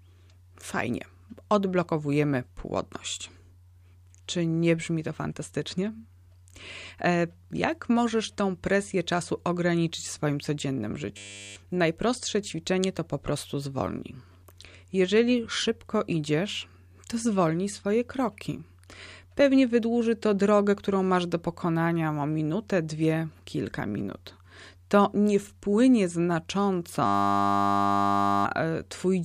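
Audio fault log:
11.17–11.56 s, system hang loop: right after "ograniczyć w swoim codziennym" the speech turns into a steady 100 Hz buzz. A single 10 ms slice of audio repeats back to back while the system is frozen and the hardware keeps cycling its buffer, and roughly 0.4 s of speech is lost.
27.06–28.45 s, system hang loop: the same 100 Hz buzz returns and lasts much longer. The same 10 ms loop repeats for almost 1.4 s because the hang went on longer before playback resumed, and about one and a half seconds of speech is gone.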